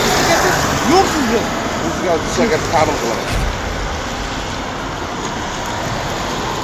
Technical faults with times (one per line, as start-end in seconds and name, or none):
none